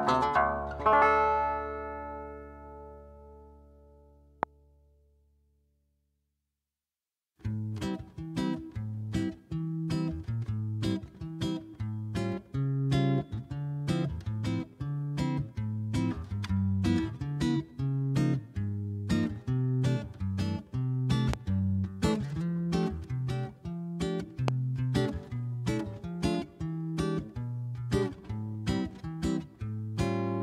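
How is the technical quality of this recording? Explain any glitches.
Three loud pops interrupt the recording, at 4.43 to 4.45 s, 21.34 to 21.36 s, and 24.48 to 24.50 s. A sudden voltage spike, likely from a switch, static or driver glitch, adds a single sharp pulse of about 20 dB above the signal, heard as a brief pop.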